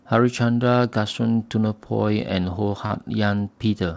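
Speech, carried over a wideband call path whose sound stops at 8 kHz, which fits a codec such as G.722. From about 2.87 to 2.93 s, short concealed packet loss occurs: roughly 30 ms of audio arrived too late for the decoder, and the receiver extrapolated from the preceding sound before blending back, leaving a brief smear or wobble where a short consonant may have disappeared.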